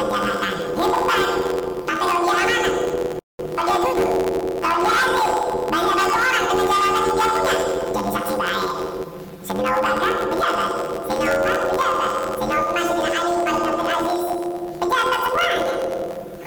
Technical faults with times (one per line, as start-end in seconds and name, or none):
0.00-16.47 planar audio read as interleaved